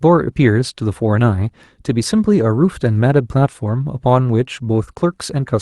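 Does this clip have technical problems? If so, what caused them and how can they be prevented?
No, there's nothing wrong to point to here: the speech comes through a normal call path whose top end stops around 12 kHz, which fits an Opus stream at about 32 kbps, so there's nothing to fix or prevent.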